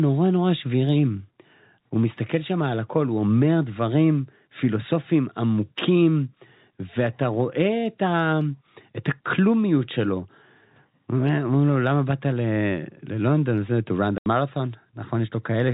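At 14.18 s the speech drops into an 80 ms gap of dead silence until 14.26 s, with hard edges: packet loss filled with silence, which fits eight 10 ms packets missing. Unlike a codec dropout, nothing is smeared or repeated, just a clean hole, over an otherwise band-limited G.711 telephone signal.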